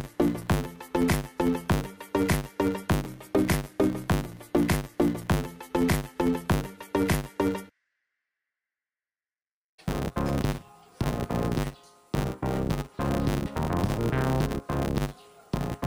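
Filter restarted on every block, throughout the clip: a buzz at 100 Hz sits under the sound from start to finish. A filter in the chain is losing its memory between processing blocks and starting each one as if from silence, so every block boundary kicks off a small transient. At 100 repeats per second these fuse into a steady buzz rather than separate ticks, which points to blocks of about 10 ms.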